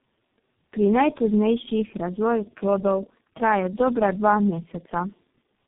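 From start to finish, the speech shows tandem speech coding. The sound is rough, muffled and warbly, more than a single low-rate coder would produce, which points to about three speech codecs in series, each re-encoding the previous one's decoded output so their distortions stack. The last stage sounds like a very low-rate coder such as G.723.1. The band ends at 3.8 kHz, adding to the muffling.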